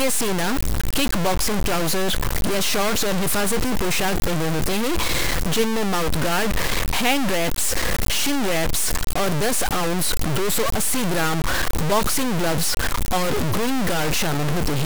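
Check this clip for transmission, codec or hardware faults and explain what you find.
One fault runs through the whole speech clip: low bit depth without dither. The sound is coarse and grainy, and quiet passages sputter or drop out. This likely comes from truncation to about 3 bits, leaving error roughly as loud as the signal. Unlike dithered reduction's steady hiss, this grit tracks the signal and vanishes in silence.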